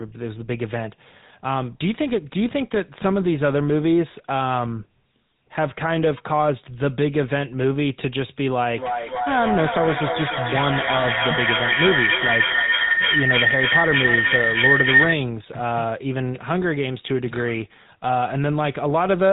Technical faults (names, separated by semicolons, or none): GSM full-rate codec; feedback howl